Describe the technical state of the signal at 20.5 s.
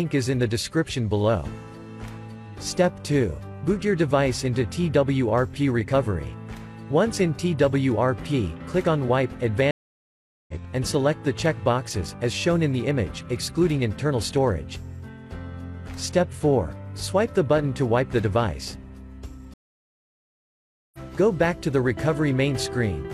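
At 20.5 s the signal is silent, inside a stream reconnect from 19.54 to 20.98 s. The connection dropped and the player restarted its decoder mid-stream. The gap lasts 1.4 s. Sound then resumes about a second further on, skipping material.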